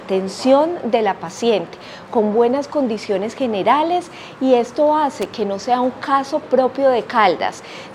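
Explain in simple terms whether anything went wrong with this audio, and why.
A worn or dirty cable contact briefly lost and regained connection, causing loose connector crackle: a short, irregular scratchy burst from 5.22 to 5.33 seconds.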